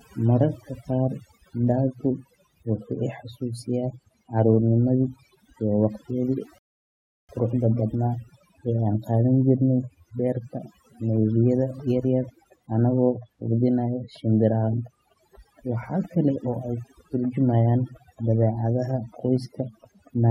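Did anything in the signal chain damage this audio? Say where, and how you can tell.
Yes. Overdone noise removal at the processing stage runs through the whole clip: the background breaks up into twinkling specks where it used to be, because bands near the noise estimate were gated out.

There's a rebuffering stall at playback from 6.58 to 7.29 s. The audio drops to silence for about 0.71 s, then picks up exactly where it stopped, so nothing's lost, just time added.

From 11.8 to 20.08 s there's a train of clicks, regular ticks at about 4.2 per second, around forty in all and roughly as loud as the speech. The likely cause is interference getting into the analogue wiring.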